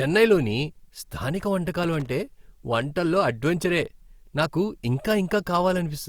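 At 1.83 to 2.09 s the speech is broken by loose connector crackle. A worn or dirty contact rapidly makes and breaks, chopping the signal into an irregular scratchy burst. The waveform shows jagged dropouts and spikes, and the spectrogram shows scattered broadband vertical streaks.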